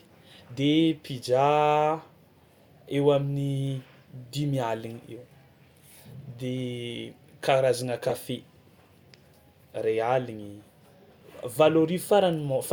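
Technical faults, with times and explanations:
8.06–8.14 s, corrupt frame decoded. A short glitch breaks into the speech for about 80 ms. Flipped bits in the compressed data reached the decoder, which played the damaged frames anyway. Misread gains and codes put energy at the wrong frequencies. The damage spans a handful of frames, so the artefact lasts only that long. It peaks at roughly −15 dBFS.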